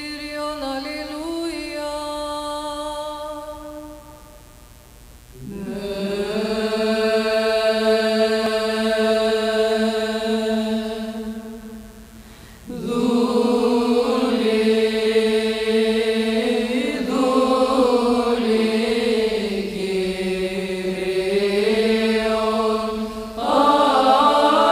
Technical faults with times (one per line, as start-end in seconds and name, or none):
0.00-24.71 mains buzz